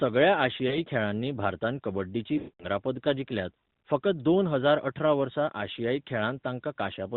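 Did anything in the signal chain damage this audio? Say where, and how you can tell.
Yes. Speech frames were lost on the radio link, and the AMR-NB decoder (12.2 kbps) concealed them. At 0.68–0.79 s one missing 20 ms frame causes a brief dip or warble. At 2.38–2.66 s about 220 ms is gone, which fits eleven frames. The decoder repeats the last good pitch and vocal-tract settings with falling gain, so the sound drags, fades to silence, then returns weak or rough.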